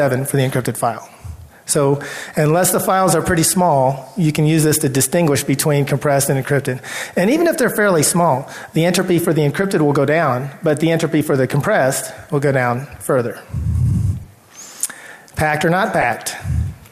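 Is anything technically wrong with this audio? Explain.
Yes. Corrupt frames were decoded at 1.01–1.04, 9.62–9.65, 10.7, 14.23–14.26 and 16.00–16.04 s. Damaged bits in one or two compressed frames gave wrong gains and codes. Each makes a brief chirp, squeak, blip or noise burst. The first is faint; the last is the loudest.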